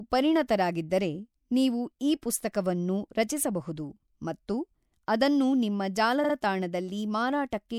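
Repeated frames at 6.23 to 6.34 s, just after "ರಚಿಸಬಹುದು ಮತ್ತು ಅದನ್ನು ನಿಮ್ಮ": a block of about 52 ms, which fits two compressed frames, plays two extra times. This produces a brief stutter and stretches the speech by about 105 ms.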